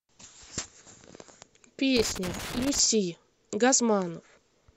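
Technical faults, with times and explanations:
1.97 to 2.79 s, loose connector crackle: an irregular burst of scratching and crackle breaks up the speech for just under a second. A worn or dirty contact is making and breaking as it shifts, chopping the signal, while any DC on the line adds sharp pops.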